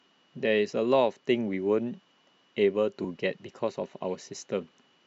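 At 3.04 s the speech has a tiny skip where an overlap between stream segments has been trimmed. Two consecutive segments, which here appear to run about 4 s each, claimed the same stretch of time. The player discarded that overlap even though the sound was not actually duplicated, so roughly 11 ms of speech is lost. On a waveform this shows as an abrupt jump where the two sides fail to meet. A spectrogram shows a thin vertical broadband line at that moment.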